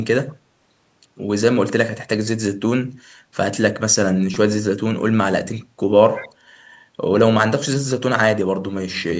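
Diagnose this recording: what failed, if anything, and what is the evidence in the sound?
Repeated buffer at the driver or buffer stage: at 4.34 s an 8 ms piece plays twice more with hard joins, giving a brief buzz. That fits a 128-sample buffer. Exact repetition separates it from codec dropout.

Echo leak in call processing: from 6.15 to 6.29 s a faint copy of the voice, about 20 dB down, trails by 188 ms. It is likely a far-end loudspeaker echo that the canceller missed. A discrete delay, not diffuse decay, rules out room reverberation.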